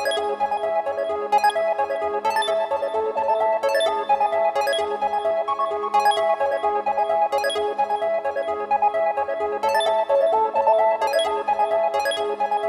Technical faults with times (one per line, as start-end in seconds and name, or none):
none